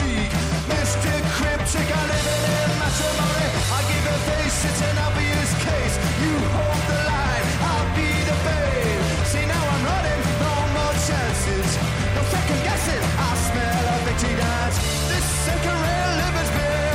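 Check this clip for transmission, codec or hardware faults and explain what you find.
There is one fault, present from start to finish. Timecode bleed: a steady chirping warble sits behind the sound throughout, roughly 20 dB below it, flipping between pitches around 1 and 2 kHz. Linear timecode at 30 frames per second, a square-wave signal on an adjacent track or cable, is leaking into the audio path.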